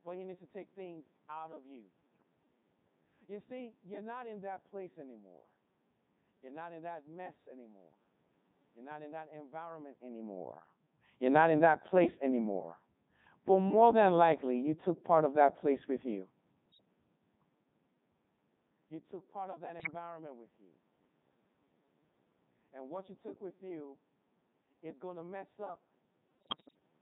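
From start to finish the speech sounds robotic and buzzy, the Codec 2 vocoder's mark: the decoder rebuilds the voice from sine waves, and the damage is heavy even at its 3.2 kbit/s mode. At 2.14–2.23 s, 16.66–16.85 s, 19.80–19.95 s and 26.40–26.79 s the voice lurches in pitch and level into warbling gibberish: bit errors on digital voice radio, with several percent of bits flipped, corrupting whole frames.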